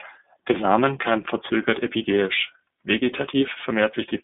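iLBC codec, throughout: the speech passes through a narrowband line of roughly 200 Hz to 3.6 kHz, with nothing higher surviving. Each 30 ms block is coded on its own, leaving a plainly audible rough, synthetic edge that fits iLBC's 13.33 kbps mode.

Lost iLBC frames, 1.97 to 2.02 s: a gap of about 30 ms, which points to a single dropped frame, is filled by the decoder repeating the last pitch cycle blended with noise. It is heard as a brief held, faintly buzzy vowel, and the speech recovers immediately afterward.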